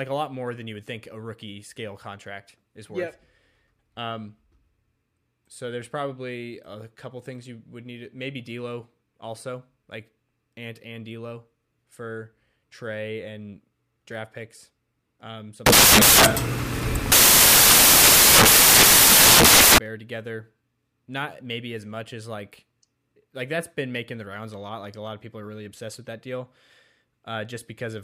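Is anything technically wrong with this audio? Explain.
Yes. From 15.66 to 19.78 s, right after "and draft picks um", the samples are built from the wrong bytes: each value is assembled with its bytes misordered or misaligned, so the rapidly fluctuating low-order bits land in the most significant positions. The result is loud, harsh broadband noise, close to white on the louder speech. On a spectrogram that stretch fills with flat broadband energy, and the waveform becomes a dense block.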